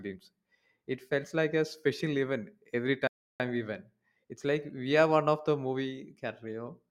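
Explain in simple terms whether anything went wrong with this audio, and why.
At about 3.07 s, right after "a special event every", the speech drops to silence for roughly a third of a second, then picks up at "we went" with nothing missing. That's a rebuffering stall: the player ran out of downloaded audio and waited for more.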